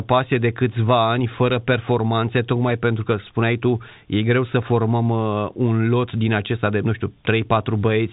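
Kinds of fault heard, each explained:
No faults heard; the speech carries the expected G.711 telephone band, with nothing above 3.8 kHz.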